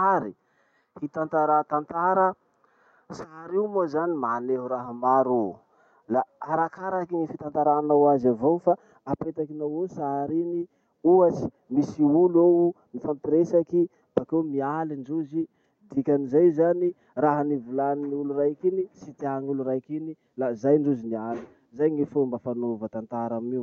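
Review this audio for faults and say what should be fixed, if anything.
Nothing stood out on listening to this speech recording, so there is nothing here that needs fixing.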